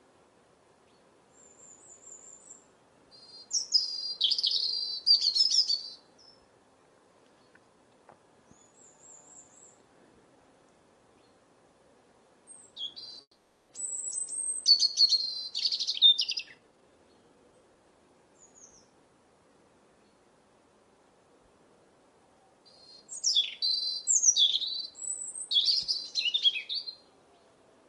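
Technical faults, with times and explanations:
13.21–13.71 s, call audio freeze: the sound stalls into a fading buzz ending in brief silence, likely an emptied jitter buffer, then resumes where it stopped, nothing missing.
15.93–17.75 s, jitter buffer speed-up: the sound hurries to about 126% speed at unchanged pitch as short pitch-period slices are cut, shedding roughly half a second of delay.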